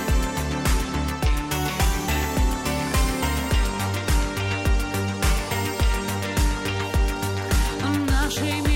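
Nothing stood out as a fault on listening to the recording.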